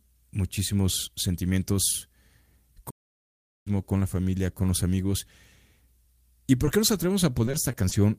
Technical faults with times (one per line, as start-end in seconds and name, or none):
2.90-3.67 playback stall
6.65-6.69 short concealed packet loss
7.45-7.93 repeated packet loss (robotic sound)